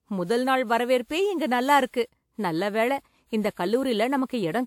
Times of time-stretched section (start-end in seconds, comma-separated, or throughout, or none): none